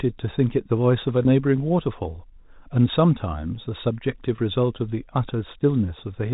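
Speech over a telephone-band G.711 line, with two short dropouts from packet loss with pitch repetition, at 1.23 to 1.25 s and 4.36 to 4.38 s. Each gap of about 20 ms, consistent with a couple of lost packets, gets bridged by repeating the last pitch period, so you hear a brief held, slightly buzzy note.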